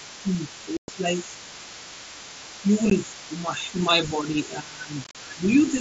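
Speech clip carried over what sounds like an mSBC wideband headset link, so a spectrogram shows energy stopping at 8 kHz. A second, fainter voice runs underneath from 0.0 to 3.55 s and again from 3.74 to 5.7 s, about 20 dB below the main talker. This is likely other side's voice leaking through, loudspeaker echo the canceller failed to remove. It appears as a weak, separate harmonic pattern between and beneath the main speech traces. The main talker's level also sags in stretches: from 0.22 to 1.06 s (roughly half a second affected, dipping by as much as 15 dB), at 2.4 to 2.71 s and 3.4 to 3.85 s (a few dB each), and from 4.1 to 5.4 s (about a second, dropping around 10 dB). This fits speech suppressed in double talk, with the echo canceller turning down both voices while they overlap. The waveform envelope shrinks and the upper harmonics thin out on the spectrogram. Sharp-edged holes mark unconcealed Bluetooth headset packet loss. 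There is a 112.5 ms gap from 0.77 to 0.88 s, a 15 ms dropout at 2.90 s, and a scatter of gaps from 5.04 to 5.15 s totalling 75 ms, the longest 37.5 ms. The durations match runs of lost 7.5 ms packets. Each gap shows as a flat line in the waveform and a vertical blank column on the spectrogram.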